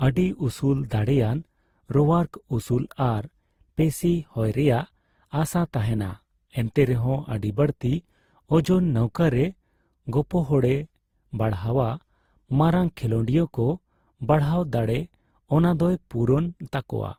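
Throughout the speech, the different artefacts of several compression passes are heard together. Nothing is heard above 20.1 kHz. This points to transcoding between lossy codecs, likely Opus passed through Vorbis, then Opus again.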